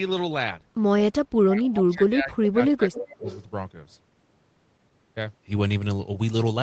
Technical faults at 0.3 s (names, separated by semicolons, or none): none